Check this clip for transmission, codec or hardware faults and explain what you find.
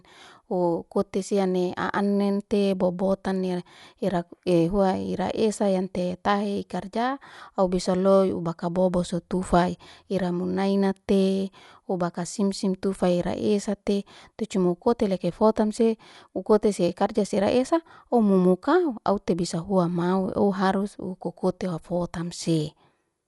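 There is one fault, present throughout. The speech sounds dull, with nothing above 11.4 kHz and a rough, fluttering noise around tones. That is likely Dolby Digital compression at a low bitrate around 64 kbps, where the encoder narrows the band and gives many frequency lines no mantissa bits, which the decoder fills with dither noise.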